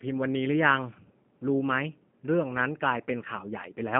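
Throughout, the speech carries G.729 codec damage. It is rebuilt from a vocal-tract filter, pitch predictor and sparse pulses, which fits an 8 kbit/s stream. Unlike a simple telephone band limit of 150 Hz to 3.4 kHz, the voice also sounds plainly rough and synthetic, with nothing above 3.4 kHz.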